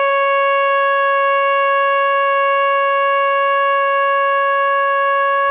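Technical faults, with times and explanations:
No technical faults can be heard in this music clip. It comes through a call path that leaves nothing above 4 kHz, which fits a G.711 A-law codec at 64 kbps.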